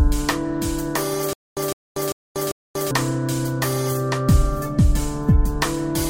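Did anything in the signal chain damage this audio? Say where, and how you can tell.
Yes. From 1.33 to 2.91 s there is a stutter with silent gaps. A 158 ms fragment repeats four times, each followed by 237 ms of digital silence, on an even 395 ms cycle. This likely comes from a stalled playback buffer replaying its last chunk. Unlike random dropouts, the fragment repeats identically at a fixed rhythm.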